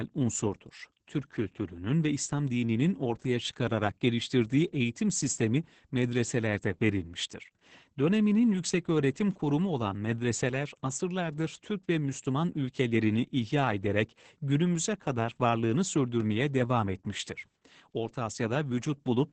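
The speech in this clip has been through Opus voice compression at a very low rate for its whole length, with the heavy damage fitting a bitrate near 10 kbps in the SILK linear-prediction mode at wideband. Nothing is left above about 8.8 kHz, so the voice sounds muffled and lacks air. The excitation is coded coarsely, which makes it hoarse and slightly robotic throughout.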